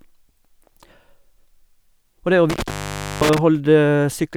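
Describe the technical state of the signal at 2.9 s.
At 2.9 s the signal is lost to an intermittent contact, a loose cable or plug briefly breaking the connection. The disturbance runs from 2.50 to 3.38 s, with the line open for about 0.51 s. The speech drops out behind crackle at each edge, leaving faint hiss.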